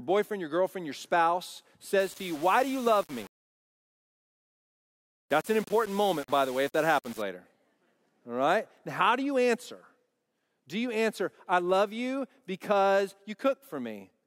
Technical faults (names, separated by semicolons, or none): low bit depth without dither